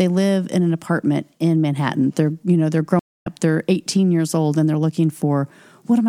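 At 2.99 s the speech drops out for about 235 ms and comes back at 3.27 s roughly a fifth of a second further along, so a short stretch is skipped. This is a stream reconnect: the connection broke, and the player restarted its decoder mid-stream.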